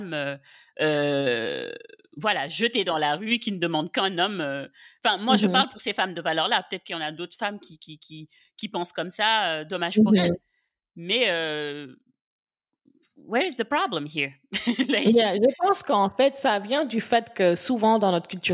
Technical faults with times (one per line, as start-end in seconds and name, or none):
none